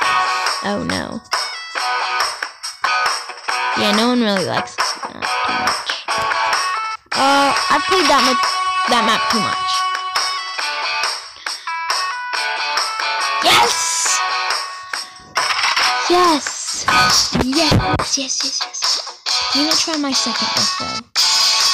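Hard clipping runs throughout. The signal is overdriven by about 7 dB, so about 2 percent of samples exceed the converter's limit. Peaks flatten, adding harsh crackle.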